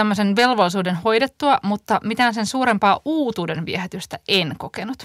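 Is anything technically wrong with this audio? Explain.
Yes, there's hard clipping at 0.39 to 0.61 s and 4.32 to 4.39 s: peaks driven about 3 dB past full scale get sliced flat, adding a brief crackly edge.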